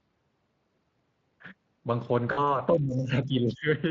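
VoIP packet loss concealed by the speech codec, 2.31 to 2.6 s: about 60 ms of audio goes missing, consistent with three 20 ms frames. The decoder extrapolates it into a fading, buzzy or noisy smear that lingers after packets resume.

Speech suppressed in double talk, 2.73 to 3.69 s: the level sinks by up to around 20 dB for about a second, likely an echo canceller muting the talker while both sides spoke.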